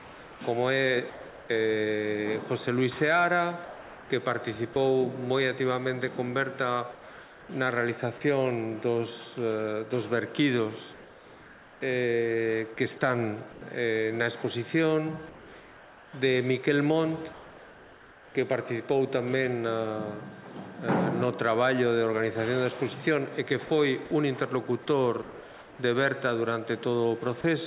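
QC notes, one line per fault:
0.0–1.49 s, 3.65–4.76 s, 6.92–7.49 s, 10.94–13.61 s, 17.33–18.35 s: comfort noise in place of the background. The sender likely stopped transmitting during these pauses, so the receiver filled the gaps with synthetic noise. Replaced spans are 800, 480, 570, 960 and 1020 ms. The real background gives way to a flat, detail-free hiss. At 6.92 s and 17.33 s, where the background sits about 21 and 24 dB below the loud parts, the fill drops it by about 3 and 2 dB.
4.73–4.76 s: sound dropped by the voice detector. Right as the preceding comfort-noise stretch ends, the detector likely judged part of the sound to be background and held transmission off for 30 ms. About 20 ms of real sound is lost and replaced by that same steady synthetic noise.
23.66–27.44 s: sound chopped by the voice detector. Across these four seconds the detector likely toggled between sending and not sending more than once, swapping about 690 ms in total for comfort noise. 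Quiet edges of the sound vanish into the fill, giving a choppy, gated texture. The sound sits within a band that stops at 4 kHz, as a narrowband telephone codec would give.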